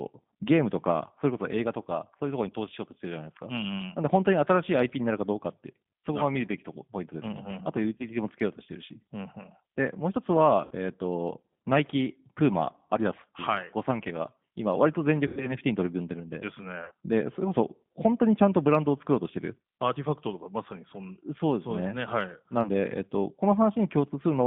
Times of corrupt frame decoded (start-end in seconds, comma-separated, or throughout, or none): none